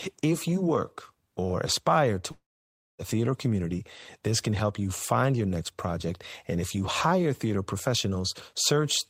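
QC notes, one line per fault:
2.31–3.02 s, long network dropout: after "work or aspire to" the sound smears into a fading buzz, then 0.58 s of silence, resuming at "theater community this can" with 0.68 s lost, likely from a stalled stream. Unlike a brief packet glitch, material is skipped, not just patched over.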